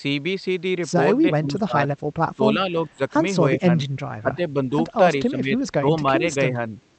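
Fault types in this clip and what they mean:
Speech suppressed in double talk: the voice dips in six short stretches by up to about 20 dB, likely from an echo canceller turning it down while both sides talked.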